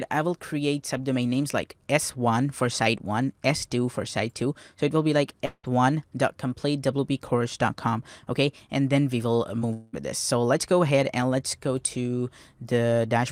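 At 5.45 s the sound gives way to a fading buzz that stretches on for about 180 ms and then drops into roughly 50 ms of silence before the audio resumes at 5.65 s with a piece missing. This is likely a long network dropout. No audio arrived for about 180 ms, so the receiver kept extending the last sound until it ran out, and the stretch that never arrived was simply skipped.

Around 9.59 to 9.63 s there is a brief smear, a quick wobble lasting only a few hundredths of a second. This is short concealed packet loss. About 20 ms of audio failed to reach the decoder in time, and the receiver covered the gap by continuing the preceding sound for roughly 17 ms before blending back into the real signal.

From 9.73 to 9.95 s a second fading buzz takes over for about 200 ms, and this time it runs straight back into the returning audio with no silent pause. This is likely another long network dropout. 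Around 200 ms of audio never arrived, and the receiver's extension of the last sound filled almost the whole gap before playback picked up again past the lost portion.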